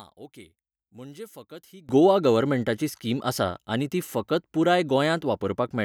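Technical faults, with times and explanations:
0.00–1.89 s, one channel inverted: speech nearly vanishes, about 20 dB down, until "गोवा गव्हर्मेंटाची स्कीम आसा"; unlike a dropout, a faint residue remains, likely mono-summed polarity cancellation.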